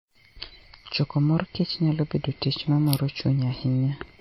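Throughout, the speech rings and washes, its hiss breathing with the signal, nothing above 18.6 kHz. This is likely WMA compression, fitting a bitrate near 48 kbps.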